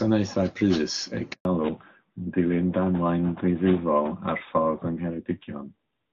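At 1.33 s a handover gap silences the speech for 120 ms while the call switches networks and no frames arrive. The waveform flatlines until 1.45 s.

From 1.45 s a fallback to narrowband sets in. The spectrogram goes empty above 4 kHz, and the clear HD Voice sound turns duller and rougher, which fits a drop to AMR-NB at about 12.2 kbit/s.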